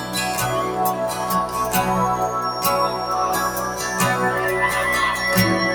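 From start to finish, a noise suppressor built for speech is working on material it was never designed for. It mistakes sustained tones, ambience and decay for noise and pulls them down by a swing of roughly 5 dB. Attacks pass intact while held portions and tails sink, so the sound flutters and thins. Unlike compressor pumping, which follows overall level, these dips track how steady the sound is, not how loud.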